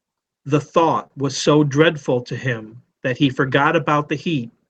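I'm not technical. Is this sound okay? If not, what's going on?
No. Just after one second in, at about 1.03 to 1.07 s and again straight after at 1.07 to 1.12 s, the speech briefly smears and wobbles. This is short concealed packet loss: two back-to-back scraps of the call, each about 20 ms, arrived too late, so the receiver filled the gaps by stretching the sound just before them. Unlike a plain dropout, you hear no silent hole, only a blurred instant.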